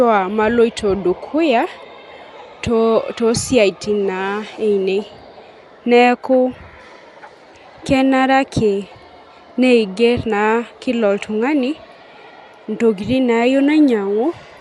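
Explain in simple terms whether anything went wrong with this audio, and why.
Likely Dolby Digital compression, throughout: the speech sounds dull, with nothing above 11.5 kHz, and rough, fluttering noise fills detail squeezed out to save space.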